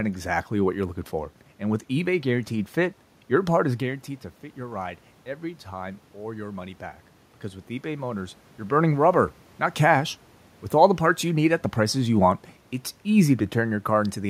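Around 3.5 s, the talker moves back from the microphone and the input falls by about 12 dB. Just after "your part is", at 3.84 s, automatic gain rising follows. The gain control hears a quieter signal and slowly turns itself up, by about 3 dB, until 6.86 s. The voice and the room noise swell together over those three seconds. The lift recovers only a small part of the drop, so the voice stays quieter.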